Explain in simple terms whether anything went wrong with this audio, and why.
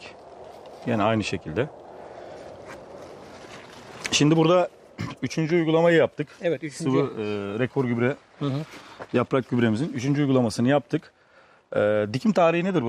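Nothing went wrong with this audio. No dropouts, glitches or other technical faults turn up anywhere in it.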